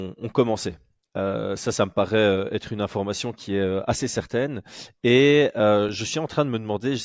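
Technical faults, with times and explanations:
Nothing technical stands out here; the speech comes across without any audible glitches or trouble spots.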